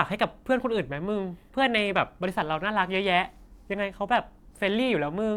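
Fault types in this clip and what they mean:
No technical faults are present; the speech has no audible dropouts, distortion, or interruptions at any point.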